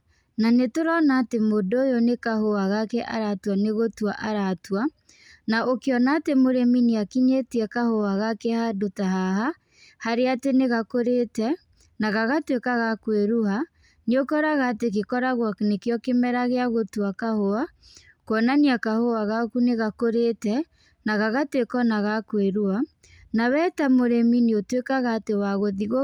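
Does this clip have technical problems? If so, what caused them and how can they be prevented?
No, nothing technical goes wrong anywhere in this recording, so there's nothing here that needs preventing.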